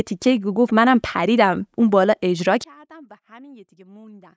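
At 2.64 s the speech drops by about 28 dB and stays faint to the end of the clip at 4.37 s, with the centred voice and its low end largely gone. The likely cause is one channel inverted: with one stereo side in reversed polarity, the shared centre cancels when the two are summed to mono. On a waveform the envelope collapses abruptly at 2.64 s, and a spectrogram shows faint energy that stays below the 8 kHz call-band ceiling.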